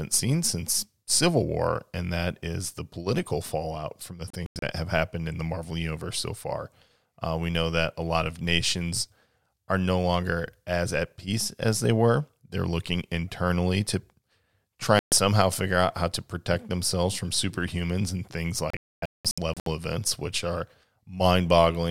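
At 4.30 s the speech drops out in a digital broadcast dropout, with holes scattered across about 320 ms and the longest about 96 ms. At 14.99 s a single gap of about 130 ms follows, and from 18.70 s to 19.67 s the cuts cluster over nearly a second, the longest about 256 ms. The receiver muted on corrupted or missing frames, and the gap lengths fit blocks of about 32 ms. Unlike analogue fading, the sound cuts or quickly fades to silence, with no noise or hiss, and the lost speech never resumes where it left off.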